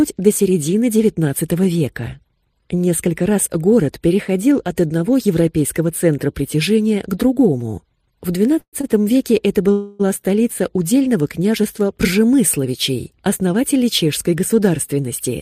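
At 8.59 to 8.75 s there's a call audio freeze: the last bit of sound gets carried on as a fading buzz, dropping to silence for about 80 ms, before things pick up right where they stopped. That's most likely packets held up in transit draining the jitter buffer. Nothing's lost, but about 134 ms of delay gets added. A second freeze at 9.72 to 10.01 s runs 272 ms, and this time the filler never goes fully quiet, just a decaying hiss until playback resumes.

Between those, at 8.81 to 8.85 s, there's a short stall from a late packet. The receiver stretches the current sound for about 25 ms while it waits, so you hear a slightly held, faintly buzzy moment. It then carries on with nothing missing.

Finally, from 13.23 to 13.75 s, there's a jitter buffer speed-up. The buffer had built up extra audio, so the receiver snipped out pitch-period-sized pieces, a few tens of milliseconds in total. Playback runs at about 107% speed with the pitch unchanged, which comes across as a little rushed.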